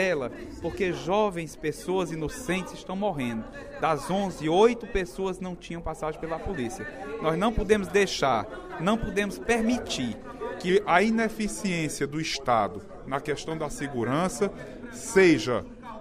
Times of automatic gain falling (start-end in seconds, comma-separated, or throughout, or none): none